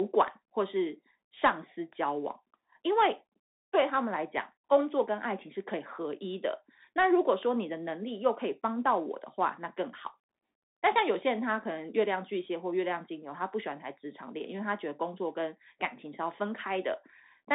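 Throughout, the speech shows Bluetooth CVSD headset codec damage: nothing above 3.8 kHz, plus scratchy s sounds and granular hiss that a clean narrowband filter wouldn't add.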